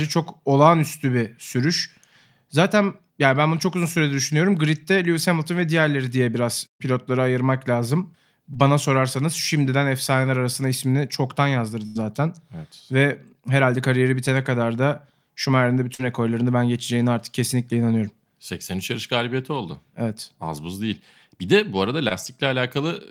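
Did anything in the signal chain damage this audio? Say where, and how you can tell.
Yes, the damage happened on the network, where short concealed packet loss hit at 8.53–8.57 s, at 15.95–16.01 s just before "rekorlarını ben geçeceğine artık", and at 22.09–22.12 s right after "de bu arada". Each time 20 to 40 ms went missing, and the decoder covered the gap by extending the previous sound, leaving a brief smear or wobble. These gaps are too short to fade, which separates them from a burst.

A burst of packet loss follows "arasında ismini çoktan yazdırdı" at 11.87–11.97 s. About 80 ms never arrived, so the receiver held the last sound for about 84 ms as a decaying buzz or hiss, then resumed further along. Unlike the short cases, there is an audible fade and a real skip in the speech.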